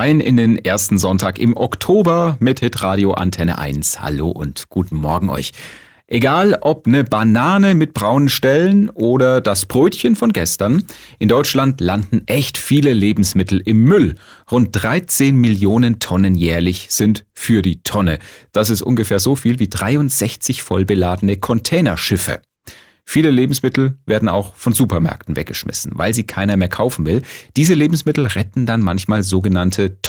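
No faults turn up anywhere in this speech recording, so there's nothing to point to along the way.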